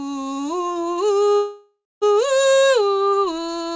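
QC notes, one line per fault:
1.36–2.04 s call audio freeze: music stalls into a fading buzz or hiss and brief silence, then resumes where it stopped rather than skipping ahead, likely from delayed packets.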